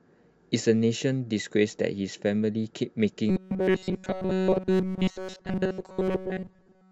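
From 3.29 s to the end, the speech takes on a robotic sound from repeated short buffers: a fixed 188 Hz metallic buzz, likely from a roughly 5.3 ms buffer looped throughout.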